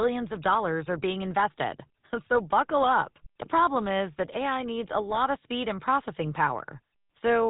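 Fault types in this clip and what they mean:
GSM full-rate codec: the speech has a plainly audible buzzy, gravelly roughness throughout, with nothing above 3.8 kHz. It comes from early mobile-phone coding that rebuilds the voice from a vocal-tract model driven by sparse, regularly spaced pulses, consistent with a 13 kbps stream.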